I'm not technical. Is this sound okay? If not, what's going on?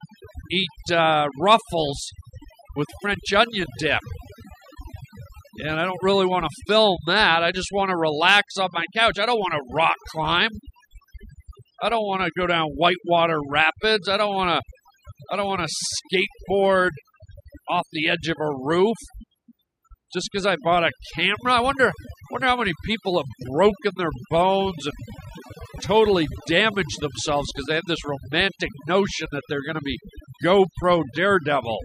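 No. Overdone noise removal runs through the whole recording. A cleanup tool set too strong has stripped out the background noise, along with quieter parts of the voice, so the pauses sound unnaturally silent with twinkling specks.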